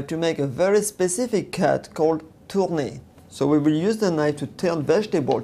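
No technical faults can be heard anywhere in this clip. The audio runs without any dropout, glitch or interruption.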